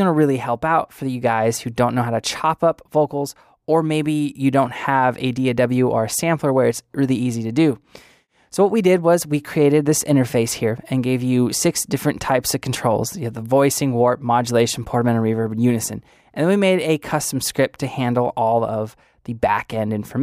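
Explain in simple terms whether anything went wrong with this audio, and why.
Nothing went wrong here: the recording shows no technical faults at any point, so the sound reaches you just as it was captured.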